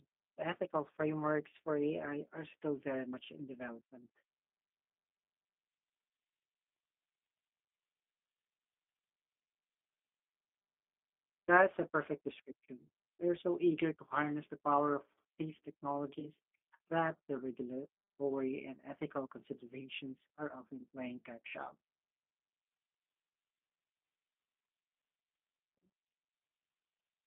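Speech heard throughout through the G.729 codec at 8 kbit/s. Its low-rate filter-and-pulse rebuild gives a rough, slightly synthetic edge, and the line band runs only from 250 Hz to 3.5 kHz, so a spectrogram shows empty space above 3.5 kHz and a bare floor below 250 Hz. From 16.20 to 16.28 s, right after "the power of these", there is VoIP packet loss concealed by the speech codec. The decoder stretches its last pitch and filter into a buzzy tone or coloured noise that fades, which fits a gap of about 20 ms, or two 10 ms frames. The damage trails on for tens of milliseconds as later frames rebuild. On a waveform this appears as a smooth, repetitive, shrinking stretch, and a spectrogram shows the spectrum frozen flat where formant movement should be.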